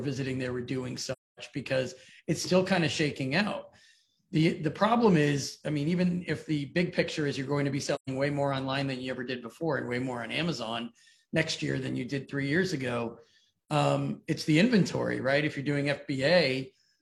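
At 1.12–1.39 s and 7.95–8.09 s, AAC frame loss with muting: the decoder zeroes the missing frames, so the sound fades out and back in.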